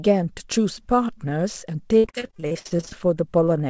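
From about 1.98 to 2.93 s there's repeated packet loss, the robotic sound kind: one hole after another, the longest around 64 ms, each patched by stretching the last bit of sound. About half that stretch is filler, so it goes choppy. The wideband call path tops out at 8 kHz.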